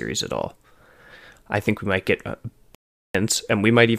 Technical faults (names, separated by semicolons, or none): audio dropout to silence